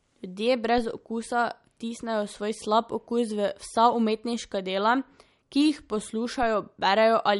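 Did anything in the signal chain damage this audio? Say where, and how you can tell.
Yes. MP3 compression runs through the whole speech clip and points to the codec stage. The audio holds nothing above 11.2 kHz, a hard treble ceiling, and the coding damage is plainly audible, with a watery, swirling texture on the speech. That is likely an MP3 encoder starved of bits, which fits a low bitrate around 48 kbps. It discards the top band entirely and switches weak frequency lines on and off between frames.

A DC step occurs at 0.78 s and again at 6.43 s, which places it at the converter or analogue input stage. At each moment the waveform's zero line jumps abruptly, heard as a low thump while the speech carries on unchanged. The offset then drains away rather than holding, the way a high-pass around 5 Hz pulls a sudden shift back toward zero over the following fraction of a second.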